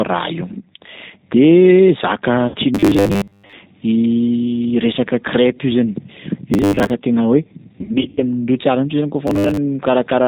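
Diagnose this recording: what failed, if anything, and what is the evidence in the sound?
Throughout, the speech sounds slightly rough and synthetic, and nothing is heard above 4 kHz. The codec stage is responsible: this is G.729, an 8 kbit/s VoIP codec, and the damage is plainly audible. It does not send the waveform. It rebuilds each 10 ms frame from a vocal tract filter, a pitch predictor and a few pulses. That sparse excitation is what gives the texture its roughness, and the narrow band sets the 4 kHz ceiling.

At 2.48–2.57 s and again at 7.81–8.24 s, the sound stretches into a fading buzzy or coloured tone and then recovers weakly. This is VoIP packet loss concealed by the speech codec, a network fault. The first gap is 60 ms, which fits three lost packets. The second is 200 ms of loss scattered across 360 ms, with a longest run of 80 ms. The decoder extrapolates from its last pitch and filter and lowers the gain frame by frame. 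Because each frame builds on the one before, the sound stays degraded briefly after the packets return.

At 2.75–3.55 s, 6.54–6.91 s and 9.27–9.58 s, the sound turns into a rigid, metallic buzz at 100 Hz that still loosely follows the speech. This is robotic sound from repeated short buffers, likely at the driver or buffer stage. A 100 Hz buzz corresponds to a 10 ms segment being replayed while fresh audio is skipped. Most of the first and third spans are repeated material, and about half of the second.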